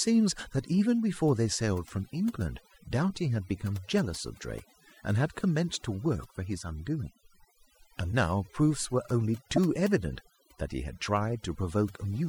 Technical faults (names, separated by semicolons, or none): overdone noise removal; damaged data in a compressed stream